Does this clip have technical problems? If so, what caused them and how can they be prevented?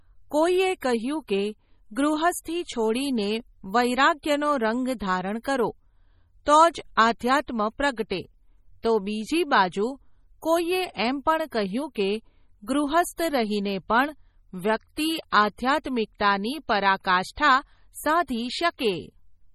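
Yes. Throughout, the speech sounds watery and swirly, with smeared attacks and nothing above 16.5 kHz, most likely heavy MP3 compression at a bitrate around 32 kbps. Prevent it by encoding at a higher bitrate or using lossless audio.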